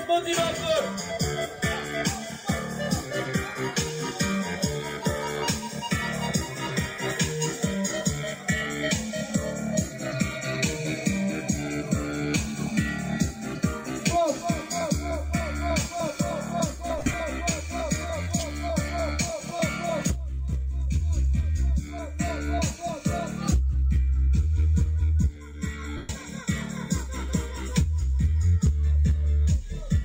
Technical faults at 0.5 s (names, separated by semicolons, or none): none